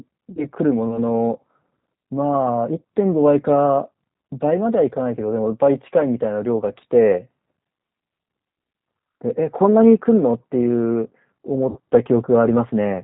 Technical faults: G.729 codec; VoIP packet loss concealed by the speech codec

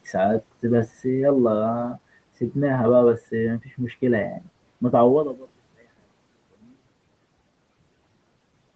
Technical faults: speech cut by the noise suppressor; zipper noise

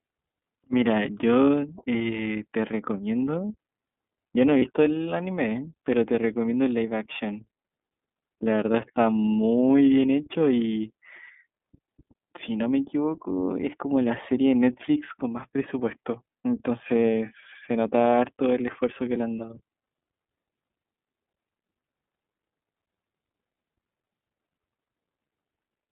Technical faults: iLBC codec; lost iLBC frames

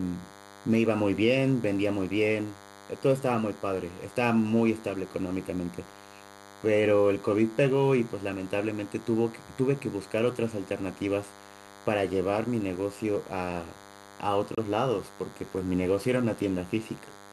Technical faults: DECT cordless phone buzz; gap between stream segments

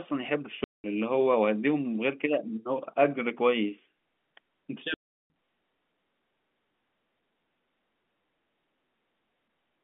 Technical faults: packet loss filled with silence

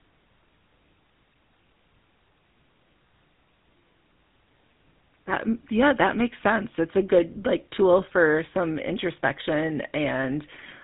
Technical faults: GSM full-rate codec

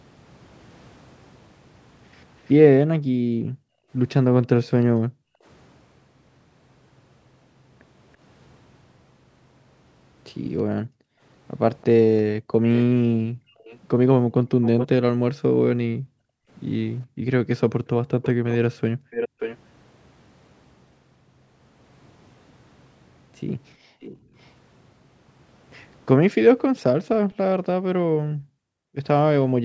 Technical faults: echo leak; background gated by the echo canceller

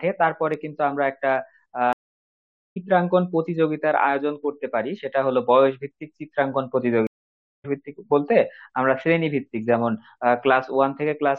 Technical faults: stream reconnect

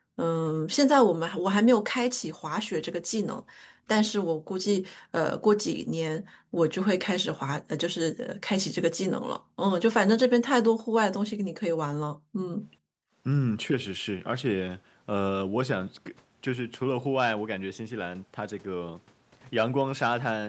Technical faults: background gated by the echo canceller

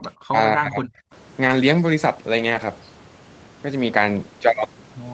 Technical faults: speech suppressed in double talk; lost packet rebuilt from error correction

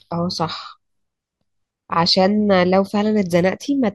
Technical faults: none

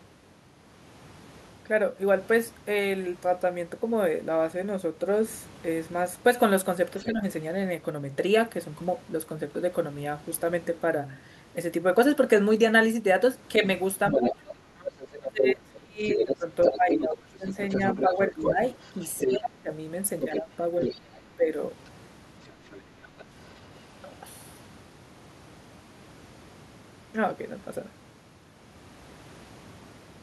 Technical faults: speech suppressed in double talk; other side's voice leaking through

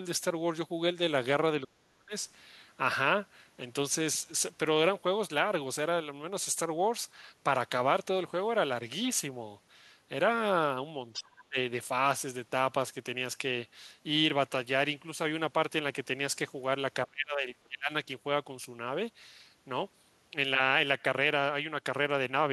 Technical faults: speech suppressed in double talk; other side's voice leaking through

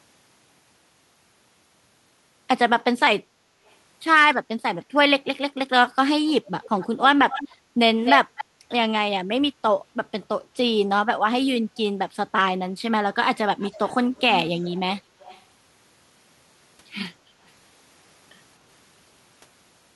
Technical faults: echo leak; background gated by the echo canceller

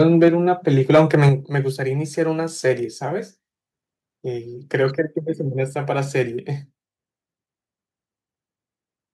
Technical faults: microphone overload; microphone volume stepped down

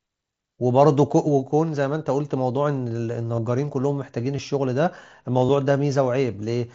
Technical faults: concealed Bluetooth headset packet loss

